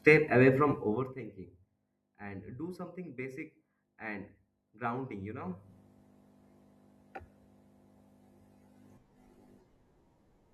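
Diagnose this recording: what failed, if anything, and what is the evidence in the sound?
A fine ticking rides on the speech from 0.77 to 1.17 s, just after "away from", as the level drops by about 20 dB, and again from 5.38 to 5.73 s after "basic and grounding you" as it rises by about 20 dB. This is zipper noise in the gain stage: the fade is applied in unsmoothed steps, roughly 200 per second, so each step puts a small click in the signal.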